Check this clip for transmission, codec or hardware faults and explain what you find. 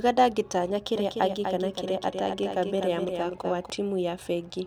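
One fault is present. A doubled audio track runs from 0.96 to 3.70 s. A second full-band copy of the speech trails by about 300 ms at a few dB below the original, likely from a slower duplicate capture path. It has no decay or room colour and switches on and off abruptly.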